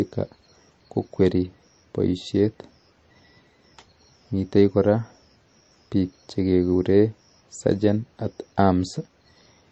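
From start to finish, this speech has nothing above about 13.4 kHz, and it carries the smeared, watery texture of a heavily squeezed MP3. The file itself looks generous, but it's most likely low-bitrate audio saved at a high bitrate: something around 34 kbit/s re-encoded at 192 kbit/s. The second pass can't put back the top end or the detail the first one threw away, so the damage simply rides along.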